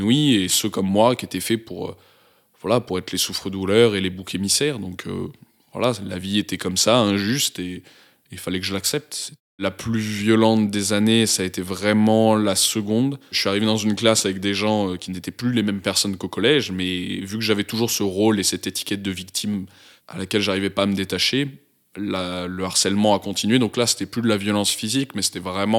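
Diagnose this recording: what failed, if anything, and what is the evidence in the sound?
Nothing failed here as far as I can hear; the speech comes through steady and intact, with no dropouts, clicks, distortion or glitches anywhere in the recording.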